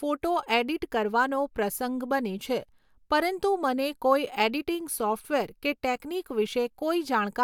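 No technical faults are audible.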